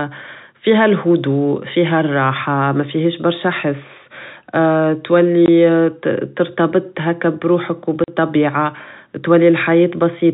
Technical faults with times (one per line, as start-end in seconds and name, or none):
5.46-5.48 packet loss filled with silence
8.04-8.08 packet loss filled with silence